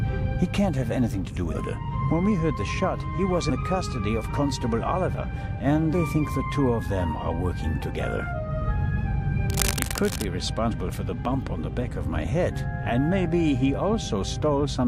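At 1.53 s a short glitch cuts through the audio, the first sign of damaged data in a compressed stream. The decoder meets corrupted frames, loses sync and resumes at the next valid frame header. The same blip recurs from 3.49 to 3.51 s.

From 9.5 to 10.29 s a dense, uneven rustle sits over the sound, nearly as loud as the sound itself. This is cable scratch noise, most likely from a worn cable or connector being moved so that its contact resistance fluctuated rapidly. It is set apart from the data damage by its length of nearly 0.8 s, its noise-like grain and the absence of any jump in the audio.

A third data-damage glitch follows from 10.71 to 10.73 s.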